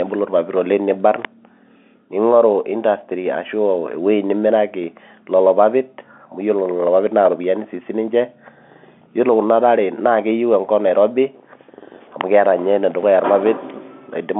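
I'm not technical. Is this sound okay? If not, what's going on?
No. Something electrical nearby, likely a switch or small motor turning on or off, sent a tiny burst of interference into the audio line. This is called an electrical switching spike. It adds a sharp snap or a tight cluster of clicks on top of the speech without replacing it, once at 1.25 seconds and again at 12.21 seconds. The speech has the narrow, slightly boxy quality of an ordinary telephone line, which is how a normal phone connection sounds.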